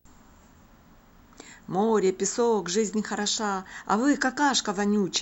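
From start to finish there's video or display buzz sitting under the speech. A screen or video cable is leaking into the audio path, so you get a low buzz locked to the picture's field rate of 59.94 Hz, with a gritty hash riding on top and a thin, piercing whine up at the line rate of 15.7 kHz. It's quiet, roughly 45 dB below the speech, but it never lets up.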